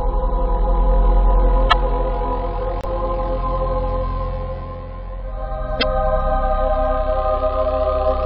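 A broken MP3 bit reservoir is the likely cause of three short glitches, at 1.69 to 1.73 s, 2.81 to 2.85 s and 5.79 to 5.83 s. Each lasts roughly two 26.1 ms MP3 frames, the audio jumps ahead, and a brief corrupted patch follows. After frames go missing, the next frame reaches back for borrowed reservoir data and decodes bytes from the wrong frame, so the first frames after each cut come out garbled.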